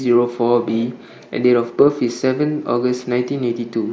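At 1.86 s there is concealed Bluetooth headset packet loss. About 7.5 ms went missing, which fits one lost packet. The gap was patched with repeated recent waveform, so it is nearly hidden.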